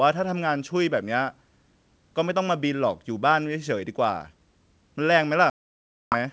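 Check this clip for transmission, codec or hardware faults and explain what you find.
One transmission fault turns up, packet loss on an ADPCM call, in speech that comes through wideband with only a faint G.722 hiss. From 5.50 to 6.15 s roughly 620 ms of packets, probably around thirty, never arrived and were filled with silence, leaving a hard-edged hole. The decoder's predictor and step size lost sync with the sender's, so the speech comes back with brief distortion.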